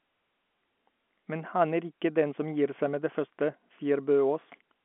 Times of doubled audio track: none

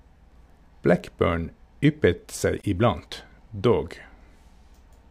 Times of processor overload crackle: none

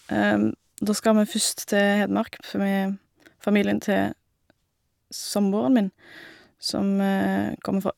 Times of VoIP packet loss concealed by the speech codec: none

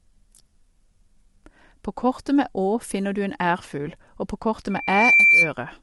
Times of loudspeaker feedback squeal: 4.70-5.53

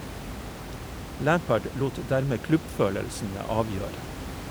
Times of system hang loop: none

